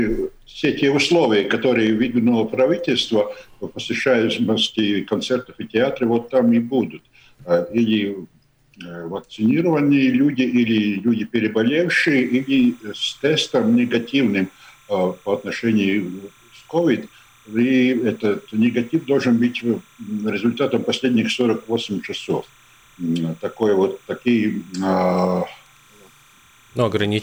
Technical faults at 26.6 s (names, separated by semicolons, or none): timecode bleed